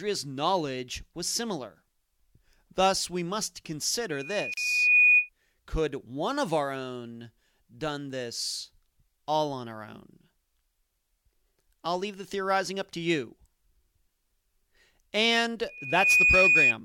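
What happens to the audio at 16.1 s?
At 16.1 s the speech is caught in a loudspeaker feedback squeal running from 15.68 to 16.74 s. A microphone is hearing the loudspeaker it drives, and at 2.5 kHz the loop gain passes one, so that frequency feeds on itself. It swells over a little under half a second into a piercing tone about 10 dB above the speech. That self-building rise sets it apart from a steady interference whistle, which arrives at full strength and stays level.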